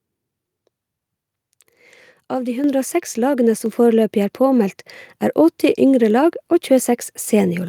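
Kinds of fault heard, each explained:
Microphone volume stepped up: at 2.64 s the speech and the background noise behind it jump up together by about 6 dB in a single step, because the call software judged the microphone too quiet and raised the device's input volume at once.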